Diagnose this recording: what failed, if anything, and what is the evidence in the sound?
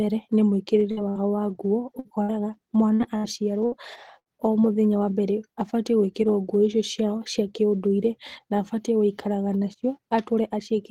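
Network: a burst of packet loss at 0.91, 1.09, 1.99, 2.23, 2.95, 3.18, 3.66 and 4.20 s. Concealment holds the last sound, fading, for about 50–65 ms, then skips ahead: 60 ms is missing. On a spectrogram this shows as flat, smeared bands cut off abruptly.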